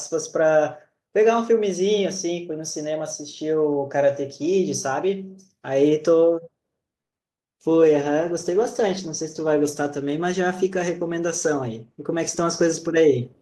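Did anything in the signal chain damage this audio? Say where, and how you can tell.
Yes. At the network stage, repeated packet loss hits the speech from 7.01 to 7.39 s. Four gaps open there, the longest 110 ms. The receiver fills each by stretching the last sound, so over a third of that span turns choppy and robotic.

Right after, from 7.46 to 7.94 s, a jitter buffer slow-down follows in the receiver's buffer. It repeats pitch periods to rebuild its reserve, adding 58 ms. Speech plays at 89% speed with unchanged pitch, so sounds drag.

At the codec, a call bitrate drop starts at 7.86 s and lasts to 12.99 s. The rate falls from 64 to 19 kbps. Opus codes more coarsely and trims the highs, so speech turns rough and muffled throughout.

Finally, a jitter buffer speed-up runs from 11.83 to 13.25 s. The buffer held too much audio, so it cut short pitch-period pieces, about a tenth of a second in total. 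Speech runs at 106% speed at the same pitch and sounds hurried.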